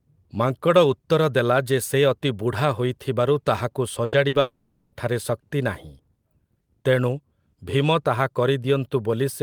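At 4.05 to 4.15 s there is a burst of packet loss. Several packets in a row never arrived in time. The receiver extended the last sound for about 80 ms and faded it. The speech then jumps ahead, with that 80 ms missing.

At 4.29 to 4.35 s comes a short concealed packet loss. About 40 ms failed to reach the decoder. The gap was bridged by continuing the preceding sound, then blending back. It is heard as a brief smear, with 40 ms of speech gone.

From 4.41 to 4.95 s the sound is replaced by a held, fading continuation lasting about 520 ms, with no fall to silence. The speech resumes later, with that stretch lost. The likely cause is a long network dropout, where no audio arrived for over half a second.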